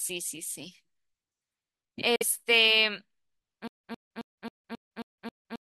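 Speech with a Bluetooth dropout at 2.16–2.23 s: the output cuts to silence, then the speech resumes further along as if it had kept playing, which points to late radio packets being discarded, likely around two packets' worth. Nothing repeats, which tells it apart from a stutter. From 3.68 s to the end there is a stutter with silent gaps: the same 106 ms fragment returns seven times at an even 269 ms period, each time followed by about 162 ms of digital silence, and the new speech is lost. That pattern is likely a stalled player or stream replaying its last buffer at each retry. The identical returning burst is what separates it from a dropout.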